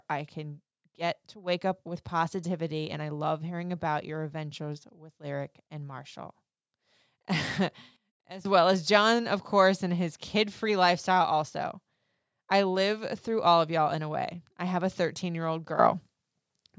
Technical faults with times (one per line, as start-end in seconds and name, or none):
7.96-8.45 sudden gain jump
15.79-16.79 sudden gain jump